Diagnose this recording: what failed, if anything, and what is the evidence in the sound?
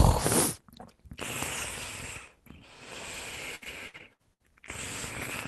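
The failure is at the network stage: repeated packet loss (robotic sound) from 3.55 to 4.42 s. Six gaps, the longest 64 ms, are patched by stretching the preceding sound, so about a third of that span is concealment. The result is a choppy stutter. On a spectrogram the stretch shows smeared, repeated frames broken by hard edges under a top edge near 12 kHz, which fits an Opus call path. The waveform shows abrupt envelope steps.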